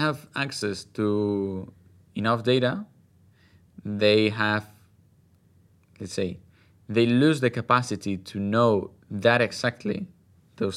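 No technical faults are audible.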